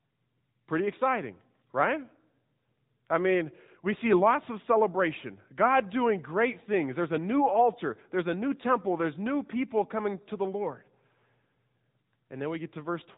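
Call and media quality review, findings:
AMR narrowband mobile codec, throughout. Speech band-limited to 3.8 kHz; plainly audible buzzy, synthetic texture from pulse-excited vocal-tract coding, consistent with a mid-rate mode near 10.2 kbps.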